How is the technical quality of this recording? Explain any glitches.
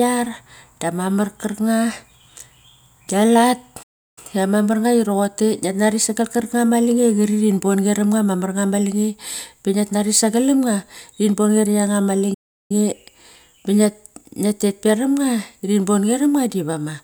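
Two playback stalls interrupt the speech, at 3.82 to 4.18 s and 12.34 to 12.71 s, each cutting the sound to silence for about a third of a second (340 ms and 360 ms). The likely cause is the player starving for data or its thread blocking. Unlike a short dropout or click, each gap is a sustained, clean silence before the sound resumes.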